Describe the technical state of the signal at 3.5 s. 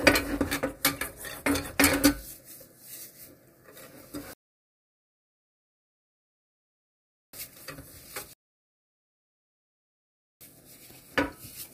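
At 3.5 s the signal is intact, with no dropout, clipping, distortion or other fault audible in the sound at that moment.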